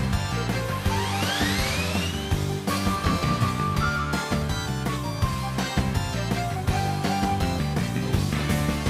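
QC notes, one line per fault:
8.23 to 8.26 s, loud pop: one sharp pop, a few decibels louder than the surrounding level, sits on top of the sound, which continues underneath. The likely cause is a sudden voltage pulse, such as static or a switch, added to the signal.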